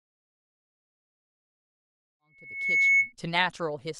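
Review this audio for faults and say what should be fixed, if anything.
Loudspeaker feedback squeal runs from 2.06 to 3.13 s. The microphone re-captures its own loudspeaker, and at 2.2 kHz the loop gain exceeds one, so the tone climbs over roughly 0.7 s until it sits about 10 dB above the speech. A spectrogram shows a single bright horizontal line thickening, and the waveform envelope swells. To prevent it, lower the monitor gain, move the loudspeaker out of the microphone's pickup pattern, or notch 2.2 kHz.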